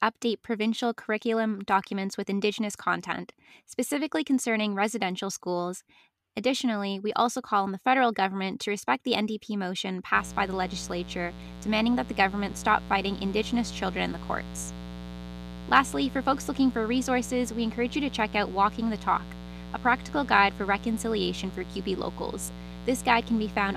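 A speech recording that picks up a steady, raspy mains buzz from 10.15 s to the end, sitting roughly 15 dB below the voice. Switching spikes at twice the 60 Hz mains rate, let in by a dimmer, rectifier or missing shield, spray harmonics well into the kilohertz range.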